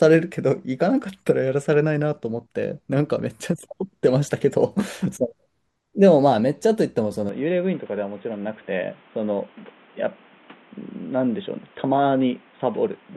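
Input switched to a poorer device at 7.29 s, lasting to the end: with no gap, the speech turns dull and boxy, with nothing above 3.8 kHz, a level drop of roughly 5 dB and a faint new noise floor, likely a change to a narrower-band microphone or headset.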